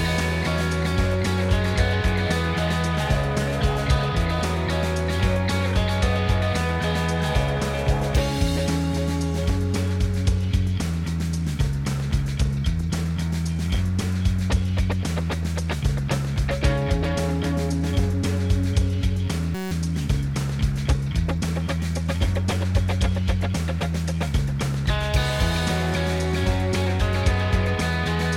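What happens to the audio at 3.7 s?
Nothing goes wrong at 3.7 s; the audio plays through that moment intact, with no dropout, click or other fault.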